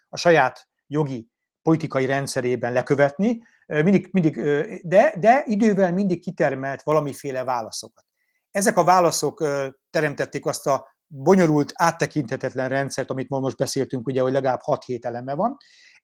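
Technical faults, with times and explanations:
6.92 to 12.08 s, pre-emphasis left on: the speech turns thin, bright and hissy on sibilants because a 75 µs FM-style treble lift was applied without the matching de-emphasis, raising 10 kHz about 13 dB relative to 1 kHz. On a spectrogram the energy above roughly 2 kHz brightens abruptly for this span, with sibilant streaks standing out; the waveform shows sharper, spikier peaks. The light Opus hybrid coding still carries the full band, so the lifted treble stays audible.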